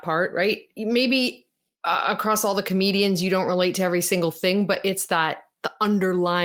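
From 4.73 to 4.83 s, the speech turns briefly rough and noisy. This is a lost packet rebuilt from error correction. A few packets went missing. The decoder played the low-bitrate copies carried in later packets, about 60 ms of audio, so nothing drops out.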